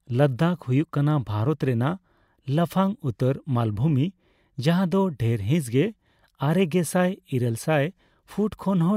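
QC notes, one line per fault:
Nothing stood out on this speech clip, so there's nothing to log.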